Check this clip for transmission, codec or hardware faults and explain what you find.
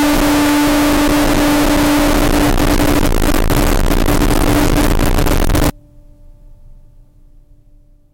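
There's one clear problem, and it's a loud one. From the start to about 5.70 s the music turns into very loud, harsh distortion, with the quiet moments blasting as hard as everything else. That points to signed and unsigned mixed up as the likely cause, which fits 16-bit samples read with the top bit flipped. Every time the waveform crosses zero it jumps across the full range.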